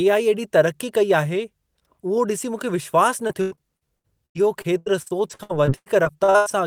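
From 3.27 s to 6.48 s, after "मूंखे विश्वास", repeated packet loss gives a robotic sound. Short holes keep recurring, the longest 99 ms. Each is patched by extending the last sound. About 29% of the stretch is patched, so it turns choppy.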